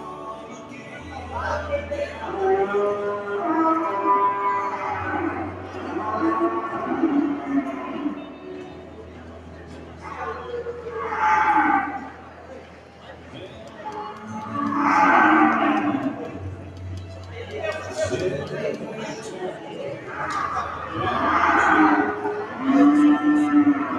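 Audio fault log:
Throughout: noise suppressor applied to music or sounds. A speech-oriented suppressor keeps misreading sustained material and ambience as noise, so its gain swings by around 10 dB. Onsets pass while held parts and tails sag, giving a pumping, thinned sound.
0.0–1.08 s, 5.51–5.89 s, 8.15–10.04 s, 12.09–13.82 s: sound cut by the noise suppressor. In these stretches the steady or decaying sound is pulled down harder, by about 5 dB at deepest, so it dips and its decay ends early.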